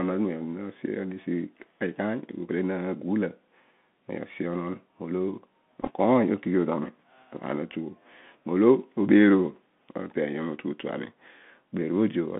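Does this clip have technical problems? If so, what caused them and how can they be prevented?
Yes. The headset link is running the Bluetooth CVSD headset codec, a narrowband scheme that sends one bit per sample saying whether the waveform should step up or down, with an adaptive step size. The sound is confined to roughly 150 Hz to 3.5 kHz, which fits a 64 kbps CVSD link, and the codec damage is plainly audible: a granular hiss, scratchy sibilants, and distortion where loud high sounds outrun the step. To prevent this, use a headset and phone that negotiate a wideband codec such as mSBC or LC3.

From 5.82 to 5.90 s there is a Bluetooth headset packet repeated fault. Voice packets between headset and phone were lost, and the chip replayed the last good packet's bits in their place. About 30 ms of audio went missing, scattered over roughly 60 ms, with the longest unbroken run only a few milliseconds. 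The result is a brief cluster of ticks and a short buzzy roughness rather than a sustained tone. To prevent this, keep the headset close to the phone and clear of 2.4 GHz interference such as Wi-Fi.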